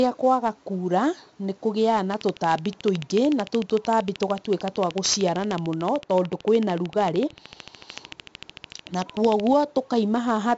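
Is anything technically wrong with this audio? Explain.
Yes, there are three faults.

Throughout, the speech has been squeezed through 4-bit ADPCM compression: each sample is coded as a coarse step from a prediction, and the damage here is heavy, consistent with a 64 kbps stream. That leaves a gritty hiss riding on every loud syllable, roughness on sharp onsets, and nothing above 7.7 kHz.

From 2.14 to 9.48 s a train of clicks runs over the audio, most likely interference or a faulty connection injecting pulses. They arrive at a steady 13.4 per second, about a hundred in all, peaking around 10 dB above the speech and ticking through the pauses too.

Between 5.65 and 7.89 s de-emphasis was applied wrongly: a treble cut meant to undo pre-emphasis hit audio that never had any, or was applied twice. The response slopes smoothly downward, about 14 dB lower at 10 kHz than at 1 kHz, so this stretch turns dull and muffled.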